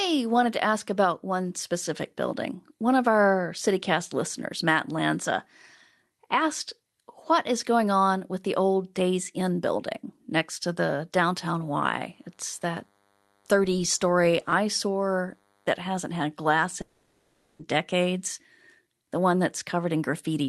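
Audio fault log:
11.41–15.75 s, DECT cordless phone buzz: a thin, steady buzz sits under the speech for about four seconds, well below the talker. It repeats 100 times a second and carries a long string of harmonics, which is the signature of a nearby DECT handset or base pinging every 10 ms, with the audio circuitry demodulating those radio bursts into the line.
16.81–17.62 s, long network dropout: for about 0.8 s the speech stops moving forward. What you hear instead is the last bit of sound stretched out as a fading smear of buzz or hiss that fills the whole gap, with no stretch of dead silence. Then the talk picks up again further along, with that chunk simply gone. That's most likely packets not arriving and the receiver's concealment covering the hole by extrapolating from what it last had.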